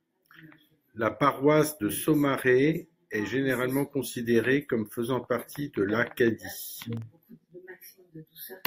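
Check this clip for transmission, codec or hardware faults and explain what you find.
One fault stands out: a processor overload crackle from 6.86 to 7.51 s. Across that stretch of speech a gritty, tearing crackle rides on top of the sound, made of tiny hard-edged dropouts into silence, and it clears once the span ends. The processor fell behind and missed a handful of very short buffer deadlines, each under a millisecond long. Every missed buffer left a brief silent gap with abrupt edges, and these clicks cluster into the crackle.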